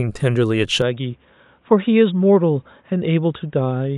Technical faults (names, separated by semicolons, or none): input switched to a poorer device